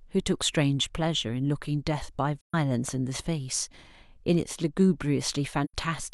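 At 2.41 s the speech drops into a brief silence lasting until about 2.55 s, and at 5.64 s a second, shorter gap runs to 5.74 s. Both are AAC frame loss with muting. The decoder received nothing for those stretches, which fits roughly three and two lost frames, and filled them with zeroed spectrum. The overlapping windows fade the sound out and back in, so the holes have soft edges, unlike a hard dropout or a concealment that repeats sound.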